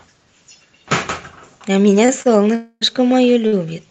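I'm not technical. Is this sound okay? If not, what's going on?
No. Short stalls from a late packet happen at 2.05 to 2.10 s, 2.22 to 2.27 s and 3.47 to 3.54 s. Each time, a piece of the call's audio arrived late, so the receiving end stretched the last sound for about 30 to 50 ms, making it hang on with a faint buzz or dip. Nothing is lost.

A call audio freeze runs from 2.55 to 2.83 s. For about a quarter of a second the speech stops and is replaced by a fading buzz or hiss that briefly drops to silence. Then it resumes exactly where it left off. The likely cause is a burst of delayed data in the connection.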